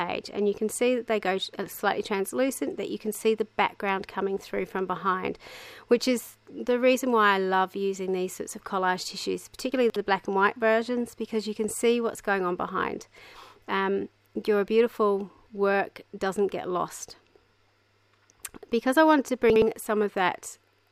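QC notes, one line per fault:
9.72–9.96 s, chunks out of order: a 60 ms block of audio plays three blocks later than it should, so the 0.24 s span comes out jumbled. Nothing is missing, but the sequence is scrambled, with three abrupt joins where mismatched blocks meet.
19.5–19.62 s, chunks out of order: two adjacent 60 ms blocks play swapped, one arriving a single block late. This gives a brief garbled hiccup at the hard joins.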